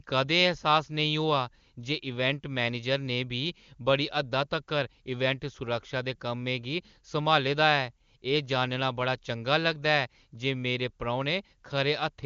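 Nothing stood out on listening to this speech, which is carried by the AMR wideband (HD Voice) codec at a high rate with its band ending around 7.1 kHz.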